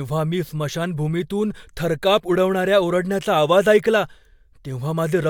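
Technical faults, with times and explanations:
No technical faults are audible anywhere in the speech.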